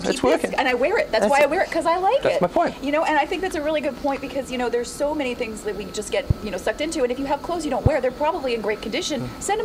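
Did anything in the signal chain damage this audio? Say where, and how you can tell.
Yes. A loud pop cuts sharply through the sound at 1.41–1.44, 6.30–6.33 and 7.86–7.89 s, roughly 20 dB above it, likely a voltage spike from wiring or a driver glitch.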